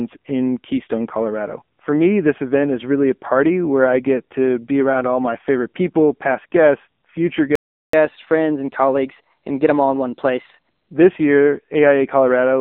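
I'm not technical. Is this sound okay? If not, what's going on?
No. The whole recording has passed through the AMR narrowband mobile codec, the compression used on older 2G and 3G phone calls. Nothing above 3.5 kHz survives, so the voice sounds thin and boxed-in. Unlike a recording that has only been muffled, this codec rebuilds the voice from a simplified model of the throat and mouth. At this heavily squeezed setting, the result sounds buzzy and robotic, like a poor mobile call.

At 7.55 s the voice stops dead for about 0.38 s, until 7.93 s. This is a playback stall. The player most likely ran short of data and had nothing to play for that moment. A dropout would throw sound away. Here the speech then carries on.

From 7.93 s to 10.93 s there is catch-up at higher speed. The player hurries through the speech it fell behind on, running it 10% fast, which also raises the pitch by about a semitone and a half. 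The voice sounds slightly rushed and higher, then settles back to normal. A simple pitch fault would not behave this way, because here speed and pitch rise together and only for those three seconds right after the stall.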